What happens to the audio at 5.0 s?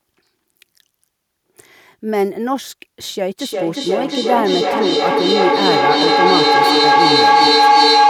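A tonal howl near 700 Hz, built from repeats roughly every 0.4 s and peaking about 7 dB above the speech, runs from 3.39 s to the end. This is feedback howl: two devices on one call share a room, so each loudspeaker-to-microphone trip adds gain.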